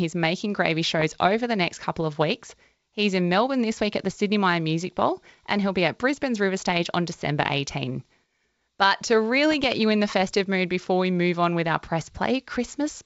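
Bit errors on an ADPCM link, at roughly 0.2 percent, hit the G.722 wideband stream from 1.00 to 1.26 s and from 9.52 to 9.65 s. Each flipped bit knocks the decoder's step size and predictor off track, so the damage rings on as pops and rough bursts with brief level changes.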